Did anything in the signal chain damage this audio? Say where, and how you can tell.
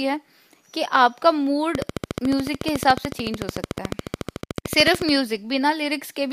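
Yes. A train of clicks runs from 1.75 to 5.10 s, evenly spaced at 13.8 per second, around fifty in all, peaking roughly 10 dB above the speech and audible in pauses. The regular, identical pulses point to a likely source in electrical interference coupling into the analogue wiring.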